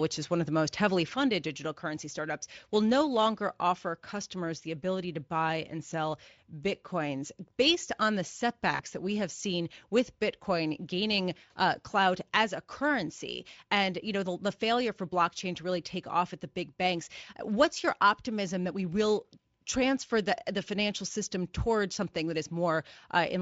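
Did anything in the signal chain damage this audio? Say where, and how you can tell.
Yes. At 1.16 s the level steps down about 6 dB and stays down to the end. It is an abrupt step, not a fade, likely one channel dropping out before the mono sum.

At the network stage, from 8.75 to 8.84 s, VoIP packet loss concealed by the speech codec leaves a decaying fill, not silence. That fits about two lost frames.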